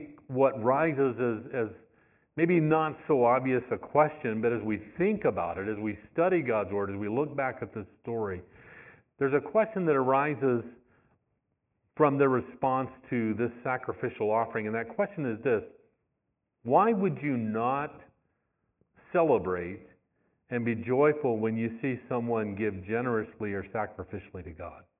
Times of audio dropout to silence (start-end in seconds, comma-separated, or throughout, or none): none